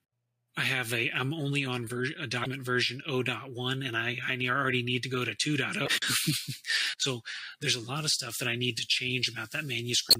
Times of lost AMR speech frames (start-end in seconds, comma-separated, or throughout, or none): none